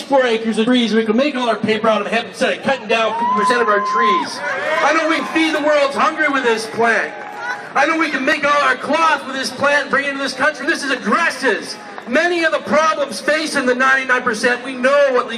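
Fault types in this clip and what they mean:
damaged data in a compressed stream: five short glitches, each about 20 ms, near 0.66, 5.19, 8.33, 10.62 and 14.11 s. Corrupted bytes in the encoded stream make the decoder misread those frames, lose sync and hunt for the next valid frame header.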